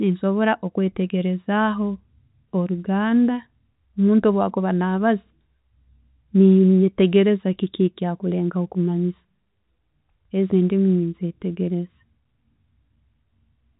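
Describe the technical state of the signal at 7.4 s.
At 7.4 s the signal is intact, carrying the speech through ordinary G.711 telephone coding with its usual band limit of about 3.8 kHz and no fault at that point.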